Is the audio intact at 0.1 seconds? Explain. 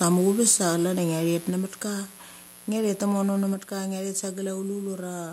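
No. From 0.03 to 0.15 s the loudest part of the speech has a harsh, crackling edge. This is microphone overload: the input level was likely set too high, so peaks ran about 4 dB past the converter's limit and a small fraction of samples had their tops flattened.

At 0.1 s a steady, raspy mains buzz also sits under the speech, roughly 25 dB below it. Sharp switching spikes, repeating twice per 60 Hz cycle, leak into the signal and spread harmonics of 60 Hz up into the kilohertz range.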